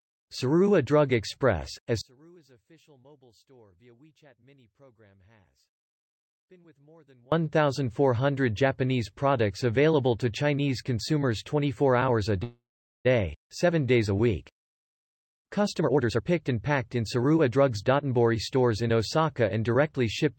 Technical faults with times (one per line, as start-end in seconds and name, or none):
2.01-7.32 one channel inverted
12.43-13.07 call audio freeze
15.66-18.89 jitter buffer speed-up